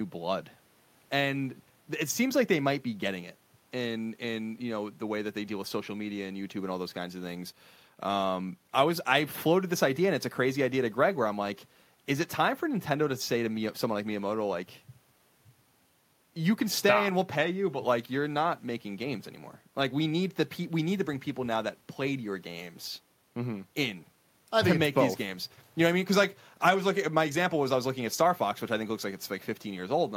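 No technical faults are audible.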